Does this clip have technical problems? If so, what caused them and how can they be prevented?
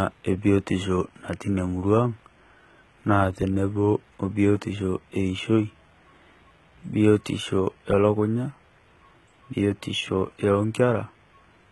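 Yes. Throughout, s sounds turn gritty and metallic above a false-sounding treble that stops near 11.8 kHz. This is likely HE-AAC compression at a very low bitrate, around 16 kbps, rebuilding the treble by copying lower bands upward. To prevent it, encode at a higher bitrate or use plain AAC for speech.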